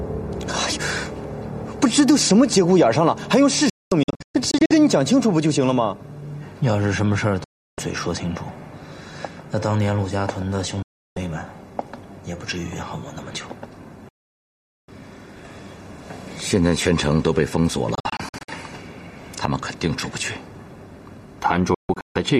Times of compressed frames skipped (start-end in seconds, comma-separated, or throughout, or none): none